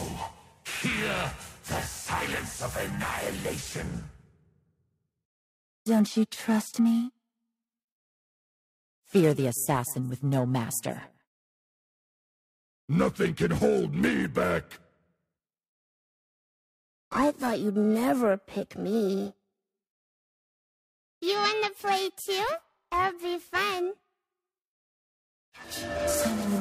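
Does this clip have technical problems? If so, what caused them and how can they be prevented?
Yes. There's periodic clock jitter running through the whole clip: something is wobbling the converter's sample clock at around 1 kHz, which puts sidebands either side of everything, worst on the high end, giving that rough, metallic edge. Keep noisy supplies and digital lines away from the clock.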